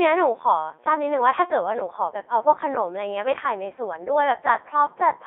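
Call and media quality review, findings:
Codec 2 vocoder artefacts, whole clip, 0 to 5.3 s. Speech robotic and buzzy, heavy damage, consistent with the top 3.2 kbit/s mode. Decoder rebuilds only pitch, voicing, energy and envelope from sinusoids; original waveform discarded. Spectrogram: band-limited to roughly 300 Hz to 3.6 kHz, smeared harmonic stacks, noise-like fricatives. Waveform: phase-incoherent and periodic-looking, not matching natural speech shape.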